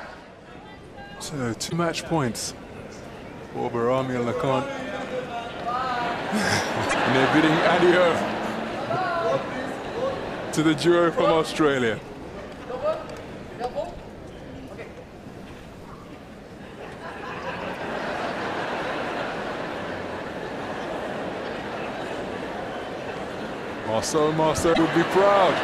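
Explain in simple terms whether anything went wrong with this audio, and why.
Damaged data in a compressed stream occurs at 1.66–1.73, 6.86–6.94, 13.84–13.86, 17.75–17.77 and 24.70–24.78 s. Corrupted bytes make the decoder lose its place, causing brief chirps or blips.

A loud pop lands at 23.17–23.19 s, with a stronger double pop at 24.03–24.20 s. These are sharp thumps over the continuing sound, likely from a sudden electrical jolt such as a plug or switch.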